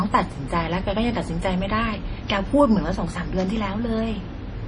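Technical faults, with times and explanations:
Throughout, MP3 compression damage, likely from a low-bitrate encode. Nothing in the speech reaches above 10.5 kHz, so the top is cut off flat and the sound is dull. The coding damage is heavy. Quiet frequency detail is discarded, and what remains flickers in and out between frames. That gives a watery, swirling texture. The level of damage fits a bitrate of about 32 kbps.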